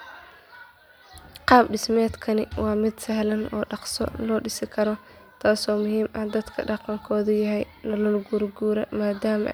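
Listening through this speech recording, nothing stood out as a technical fault at any point.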